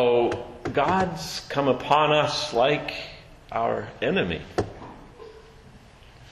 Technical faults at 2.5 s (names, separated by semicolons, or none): block of digital silence